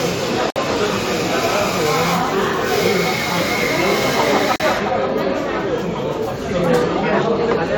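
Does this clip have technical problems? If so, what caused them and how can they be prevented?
Yes. Brief silent dropouts with smeared edges interrupt the sound at 0.50–0.56 s (57 ms) and 4.56–4.60 s (40 ms), roughly 4 s apart. These are gaps at a join of encoded pieces: each separately encoded segment kept its encoder start delay and final-frame padding. To prevent this, trim encoder delay and padding before joining, or encode the whole recording in one pass.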